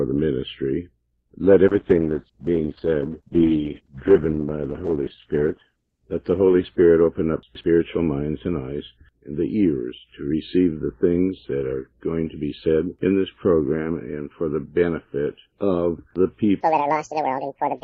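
From 1.69 to 9.73 s, a call bitrate drop cut the encoder from 128 to 11 kbps, bottoming out for 3.45 s, so the sound turns coarse, watery and muffled. From 16.61 s to the end, a section plays at the wrong speed, likely from a clock mismatch, running 1.91 times fast and about ten semitones high.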